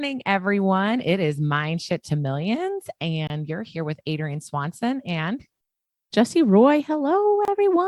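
At 3.27 to 3.30 s and again at 7.45 to 7.48 s, the speech drops out for about 27 ms: a gap at a join of encoded pieces, where encoder start delay and end padding were left untrimmed. The waveform shows a flat strip, the spectrogram a slightly smeared blank column.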